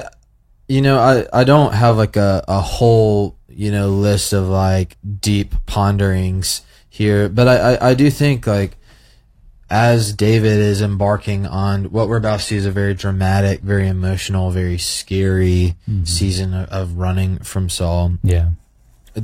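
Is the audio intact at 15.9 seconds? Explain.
No. The moment at 15.9 s falls inside an adaptive stream at a lower bitrate, running from about 9.26 s to 17.26 s. The stream stepped down to a reduced-quality rendition, most plausibly because throughput fell. The speech there has nothing above 14.9 kHz. That fits a switch from AAC-LC at 96 kbit/s to a low-rate HE-AAC stream with spectral band replication. Both the change in and the change back are abrupt, with no gap.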